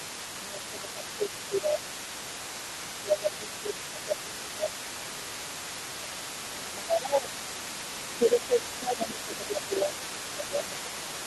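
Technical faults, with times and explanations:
0.00–0.13, 0.35–2.32, 2.98–5.65, 5.93–6.15, 6.49–7.67 and 8.19 s to the end: speech suppressed in double talk. In each stretch the talker's level sinks while the far side is also audible, by about 5 dB at the start, about 10 dB around 6 s and from 8.19 s, and as much as about 15 dB in the longer middle stretches. This is likely an echo canceller that could not tell local speech from loudspeaker echo and turned both down.
Throughout: other side's voice leaking through. A second voice sits under the main speech for the whole clip at about 15 dB below it. The likely cause is the talker's loudspeaker playing the other side back into the microphone, with the echo canceller removing only part of it.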